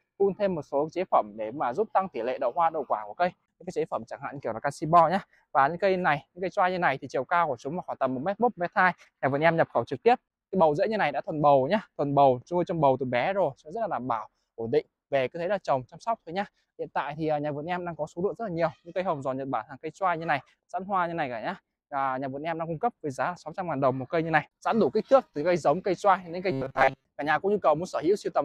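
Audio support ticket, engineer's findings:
Robotic sound from repeated short buffers, 26.52–27.04 s. Rigid metallic buzz at 134 Hz over most of the span. Likely an underrun, with a period of about 7.5 ms recycled. Unlike dropouts, there are no gaps. The fixed pitch gives it away.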